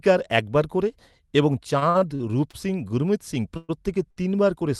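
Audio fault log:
1.79–2.55 s, repeated stalls (stutter): packets kept reaching the receiver late, so the jitter buffer ran dry five times, the longest gap 52 ms. Each gap was bridged by extending the preceding sound, about 0.17 s in all, roughly a fifth of the span, so the audio drags and stutters while nothing is lost.
3.57–3.71 s, call audio freeze: the jitter buffer most likely emptied because packets were held up in transit. The last sound is carried on as a fading buzz or hiss for 122 ms, never reaching silence, then the audio resumes exactly where it stopped, leaving an inserted gap with nothing missing.
4.11–4.18 s, short stall from a late packet: one packet missed its playout time, so the receiver stretched the preceding sound for 58 ms until it arrived, then continued from the same point. The result is a briefly over-held sound with a slight buzz or dip, and no content dropped.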